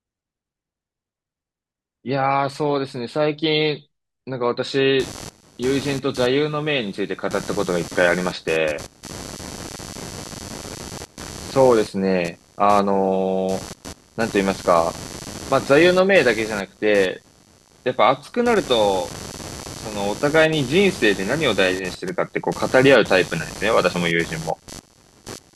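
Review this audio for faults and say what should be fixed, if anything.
Computer activity noise runs from 4.99 s to the end at 25.55 s. A buzzing, chirping pulse repeats roughly 100 times per second, sitting roughly 15 dB below the speech. Processor or graphics load is disturbing the shared ground. The noise follows the computer's activity, not the speech. To prevent it, record through an external, isolated audio interface or add a ground-loop isolator.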